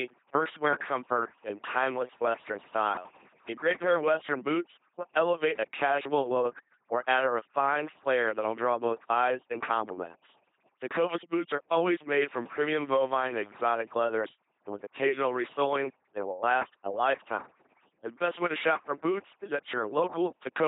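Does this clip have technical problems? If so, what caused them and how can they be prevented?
Yes. Throughout, overdone noise removal pushed frequency bands near the noise estimate down or off, leaving near-silent gaps with twinkling specks. Prevent it by using gentler reduction settings.

The speech also passed through an LPC-10 vocoder, consistent with 2.4 kbit/s, forcing each moment to fully voiced or unvoiced, so it buzzes mechanically and nothing survives above 3.8 kHz. Prevent it by using a modern wideband speech codec instead.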